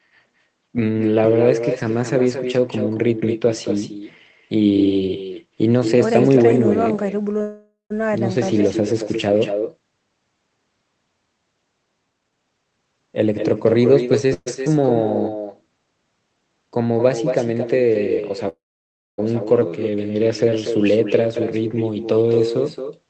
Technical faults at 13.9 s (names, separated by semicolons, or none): echo with no canceller; jitter buffer speed-up